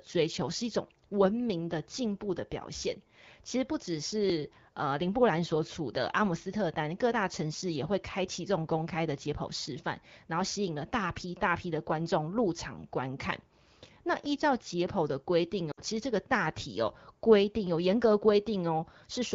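A speech recording with two kinds of fault. Brief skips land at 4.30, 9.28 and 14.26 s, almost exactly 5 seconds apart. At each, a sliver of sound, roughly 20 ms, vanishes and the two sides butt together with no gap. That clockwork spacing points to audio missing between chunks, most likely a recorder or processor working in 5-second blocks and dropping a little material each time it closes one block and opens the next. Later, from 15.71 to 15.81 s, the voice briefly drops to near silence within two frames before speech resumes weak or rough for a moment. That is lost AMR speech frames. About 60 ms of coded speech failed to arrive intact, which fits three 20 ms frames, and the decoder covered the hole by repeating the last good pitch and vocal-tract settings at falling gain. The surrounding wideband sound is clear, consistent with an AMR-WB (HD Voice) call.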